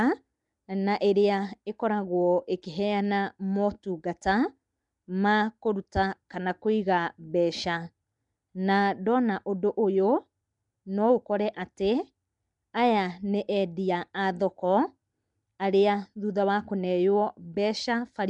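From start to finish the speech carries a rough, hissy halo and a smeared, underwater quality, plainly audible throughout, with nothing above 10.6 kHz. This is likely Nellymoser compression, the Flash-era codec that spends a fixed, small bit budget on each short block, leaving quieter bands unfunded and filling them with noise; the damage level fits a rate around 44 kbps. A spectrogram shows a hard ceiling at 10.6 kHz and speckled, noisy patches between the stronger harmonics.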